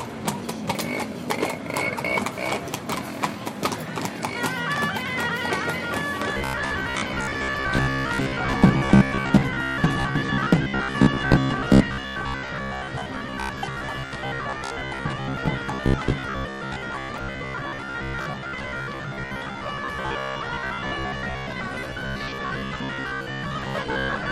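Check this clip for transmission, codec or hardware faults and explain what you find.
One fault is present. From 6.32 s to the end, the sound becomes a rigid, metallic buzz fixed near 66.7 Hz. This is robotic sound from repeated short buffers: audio likely arrives too seldom, so a 15 ms slice is replayed for roughly half the time while real material is skipped.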